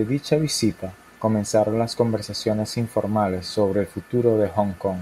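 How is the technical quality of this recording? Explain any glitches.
No glitches or technical faults can be heard anywhere.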